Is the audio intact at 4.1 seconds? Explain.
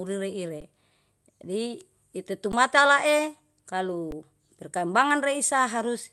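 No. At 4.11 s there is an underrun with held sample lasting about 12 ms, spanning 512 samples. The output buffer emptied and the converter held its last value, so the waveform sits flat and the sound drops out with little click at its onset. About 10 ms of live audio was lost during the stall before data returned.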